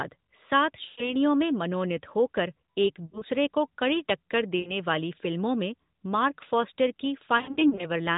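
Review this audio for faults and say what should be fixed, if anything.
Brief dips and warbly, drawn-out fades at 0.86–1.16 s (before "में मनोनीत हो कर"), 3.06–3.25 s, 4.60–4.76 s and 7.38–7.86 s are lost AMR speech frames: radio errors corrupted frames, and the narrowband decoder stretched the last good one with falling gain. Stronger radio error protection or better link quality would prevent these losses.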